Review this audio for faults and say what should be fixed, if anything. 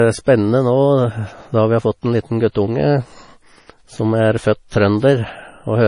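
Likely MP3 compression throughout, starved of bits (fits roughly 32 kbps): the encoder cuts everything above 10.5 kHz and drops weak detail, leaving the speech dull and watery. Encode at a much higher bitrate or keep a lossless copy for delivery.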